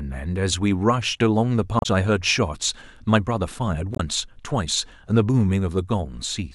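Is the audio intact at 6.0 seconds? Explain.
Yes, at 6.0 seconds the audio is intact, with no dropout, click, distortion or other fault audible at that point.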